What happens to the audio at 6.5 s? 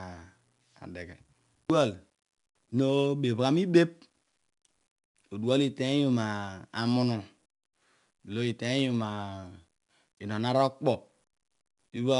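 At 6.5 s the speech carries 4-bit ADPCM compression, as it does for the whole clip. Each sample is coded as a coarse 4-bit step from a predicted value, so the error becomes a gritty hiss that rises and falls with the speech and roughens sharp consonant attacks. Nothing sounds above about 10.7 kHz, which fits a 22 kHz rate near 89 kbps. Unlike steady tape hiss, the noise vanishes in pauses. Unlike perceptual codecs, it doesn't swirl or warble.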